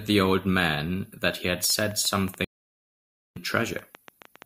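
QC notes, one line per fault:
1.64–4.43 s: train of clicks, about 20 irregular ticks near 7.8 per second, peaking roughly 5 dB above the signal, likely interference; thin vertical lines on a spectrogram.
2.44–3.37 s: stream reconnect, 0.90 s dead silence, then the audio resumes about 0.7 s further on; silent gap, then fresh fade-in.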